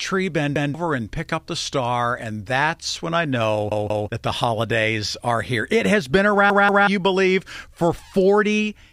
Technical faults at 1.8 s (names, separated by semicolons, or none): none